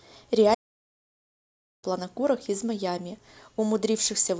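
A short speech recording with a playback stall: at 0.54 s the sound cuts off mid-flow and the output stays silent until 1.84 s, a gap of about 1.29 s. That is far too long for a buffer dropout, which is a few milliseconds and heard as a click or tick, and it is not a fade or level dip, since the audio simply halts and then continues. The likely cause is the player running out of data or its playback thread being blocked until it recovered.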